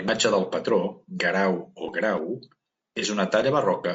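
From the start the speech sounds rough and grainy. Noise sits between the harmonics, and the top band sounds thin and synthetic. The damage is plainly audible. This is likely low-delay AAC compression, as used in video calls. Its short frames resolve pitch harmonics poorly and spend bits fast. At this quality the sound points to a low rate, around 32 kbps, which leaves too few bits to keep the voice clean.

At 2.99 s, for about 40 ms until 3.03 s, the sound briefly smears into a noisy, phasey patch. This is AAC frame loss with concealment. Audio data went missing, roughly 30 ms of it, which fits a single lost frame. The decoder patched the gap from the last good spectrum. The guess is close but not exact, so the join sounds blurred.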